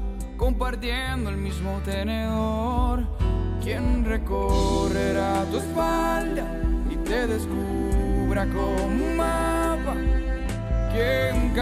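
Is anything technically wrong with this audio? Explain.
No, the signal shows no technical faults anywhere in the recording.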